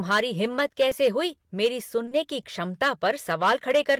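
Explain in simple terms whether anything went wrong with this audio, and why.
Two things went wrong here. First, there's hard clipping all the way through. The speech was pushed louder than the recording chain could handle, so the tallest peaks got sliced flat. Only a small share of the signal hits that ceiling, but it adds a gritty crackle whenever the voice gets loud.

Second, there's short concealed packet loss at 0.89 to 0.93 s, and again at 2.05 to 2.13 s, where two losses run back to back. Bits of the call arrived too late, so the receiver papered over the gaps by stretching out the previous sound. You hear a quick smear or wobble, a little longer at the second spot.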